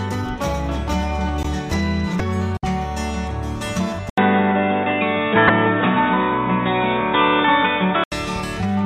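The audio has two quick blips, at 2.17 to 2.21 s and again at 5.46 to 5.50 s. That's damaged data in a compressed stream: part of the data got mangled, so the decoder choked on those frames, lost sync and skipped ahead to the next good header. At 4.10 s there's an 80 ms gap, then everything goes dull and boxy with nothing above 3.8 kHz, a shift of a few dB in level and a faint new noise floor well down in the background. That lasts until 8.12 s and is likely the input switching to a poorer device, say a headset's call profile taking over from the main mic.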